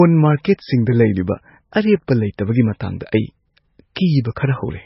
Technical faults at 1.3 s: MP3 compression

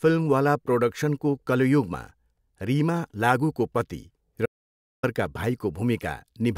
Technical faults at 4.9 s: audio dropout to silence

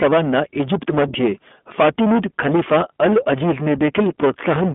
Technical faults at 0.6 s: hard clipping; iLBC codec

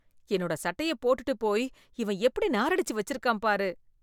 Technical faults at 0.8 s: none

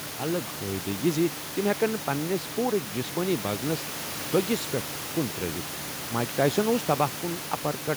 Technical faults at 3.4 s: none

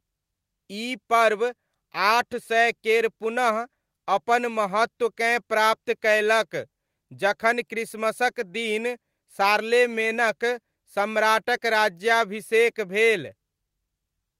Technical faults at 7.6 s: none

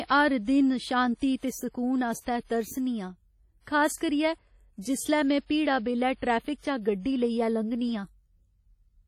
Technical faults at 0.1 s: WMA compression

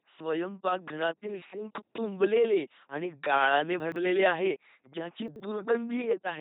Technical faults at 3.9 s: LPC-10 vocoder; chunks out of order

